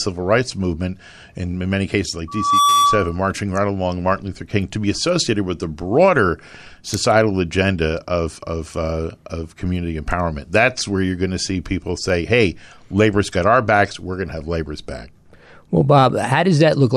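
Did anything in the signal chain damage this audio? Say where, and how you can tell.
Yes. From 2.28 to 3.19 s there is a loudspeaker feedback squeal, an acoustic loop in the analogue stage: the microphone re-amplified its own loudspeaker, and at 1.2 kHz the loop gain exceeded unity. Unlike a steady interference whistle, the tone swells over roughly a third of a second and peaks about 5 dB above the speech.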